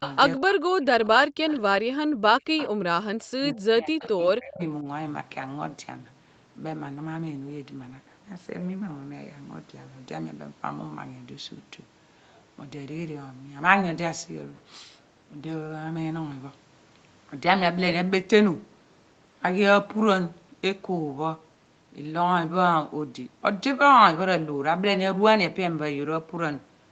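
Echo leak occurs in this speech clip at 0.00–0.16 s, 1.49–1.60 s, 2.57–2.69 s and 4.00–4.23 s: a copy of the voice trails about 191 ms behind, roughly 10 to 20 dB below the direct speech. The likely cause is a far end playing the call through a loudspeaker whose echo canceller let part of the microphone pickup slip back into the return path, so short delayed scraps come through. Speech suppressed in double talk follows at 0.39–1.52 s, 1.72–2.73 s, 3.40–4.60 s and briefly at 4.82–4.87 s. The voice sinks by as much as about 40 dB in the first two stretches and about 30 dB in the third, while the last dip is only slight. These gaps overlap the echo bursts, which fits an echo canceller that couldn't separate the near talker from loudspeaker echo and turned both down, with about a second of speech affected in each of the first three stretches and about 50 ms in the last. The audio stops at 8 kHz, which fits a wideband call codec such as Opus at around 32 kbps.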